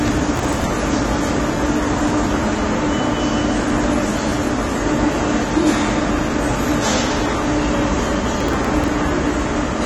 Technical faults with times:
0.00-9.85 AAC compression
0.36-0.66 processor overload crackle
8.37-8.88 processor overload crackle

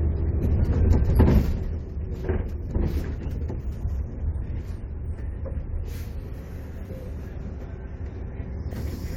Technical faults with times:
8.73 corrupt frame decoded

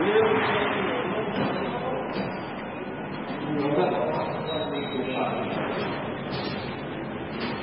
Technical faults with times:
0.00-7.63 transcoding between lossy codecs

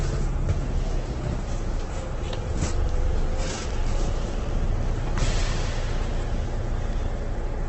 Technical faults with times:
0.00-7.68 Opus compression

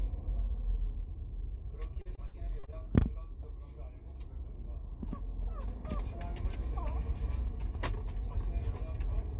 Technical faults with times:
1.94-2.74 repeated packet loss (robotic sound)

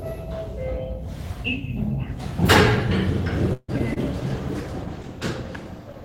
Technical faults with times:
3.53-3.70 call audio freeze
3.78-3.98 short concealed packet loss
4.13-6.04 call bitrate drop

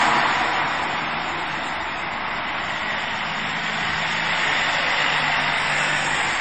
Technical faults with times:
0.00-6.41 low-bitrate audio saved at a high bitrate

